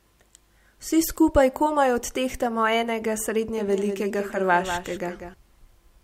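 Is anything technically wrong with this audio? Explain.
Yes. From 3.58 s to 5.34 s, just after "skupaj komaj odtehtamo enega", the speech has a faint full-band echo trailing about a fifth of a second behind, roughly 10 dB quieter, starting and stopping abruptly. This is a doubled audio track, likely from a slower second capture path.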